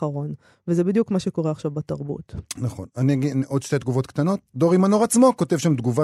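Nothing here stands out as a technical fault; the speech runs along with no glitches or interruptions to point at.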